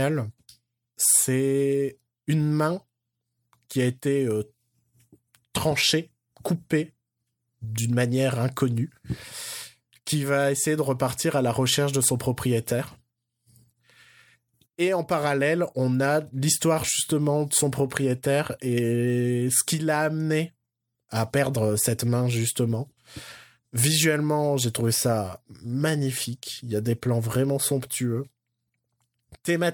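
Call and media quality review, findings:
Nothing to flag on this speech recording: no audible faults anywhere, so no findings to log.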